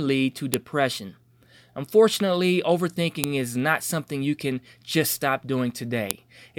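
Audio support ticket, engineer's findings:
File header played as audio: sharp, loud clicks in the speech at 0.54 s (after "lead to"), 3.24 s (before "is not something you") and 6.11 s. Joined WAV segments kept their headers; those header bytes decode as samples, snapping regardless of signal.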